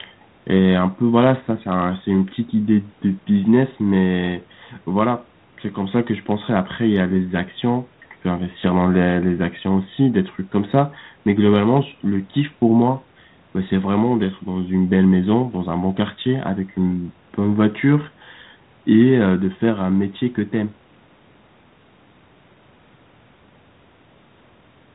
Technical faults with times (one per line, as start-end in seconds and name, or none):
none